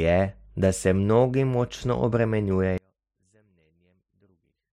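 At 2.78 s the speech abruptly drops by about 39 dB and stays nearly silent until the clip ends at 4.73 s, leaving only a faint trace. The likely cause is one channel inverted: with one stereo side in reversed polarity, the centred speech common to both cancels when they are summed to mono. On a waveform the envelope shrinks suddenly to a sliver. A spectrogram shows the energy, the low end included, almost wiped out from that point.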